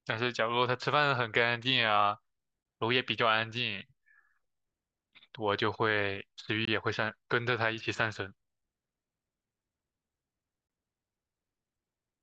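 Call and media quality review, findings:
Short hard-edged dropouts in the speech at 2.63–2.65 s, 6.65–6.67 s and 10.67–10.70 s, each about 21 ms, evenly spaced 4.0 s apart. Gap between chunks: audio handled in 4-second blocks, with silence inserted at every join, probably from codec padding or a player starting each chunk late. No content lost, only interrupted at the boundaries.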